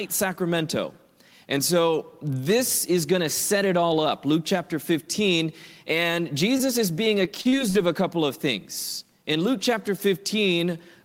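At 6.57 to 6.61 s, a short concealed packet loss occurs: about 20 ms of audio failed to reach the decoder in time, so the receiver extended the preceding sound across the gap and faded back into real signal, leaving a brief smear or wobble. From 7.25 to 7.76 s, repeated packet loss produces a robotic sound: four separate gaps, the longest 44 ms, were each patched by extending the last sound, so about a quarter of that half-second is synthetic fill, heard as choppy audio with pieces missing.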